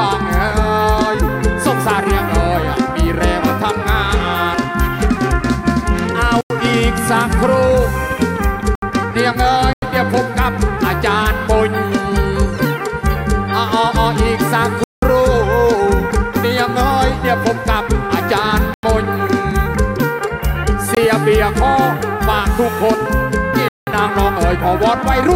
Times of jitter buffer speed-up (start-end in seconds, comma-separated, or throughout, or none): none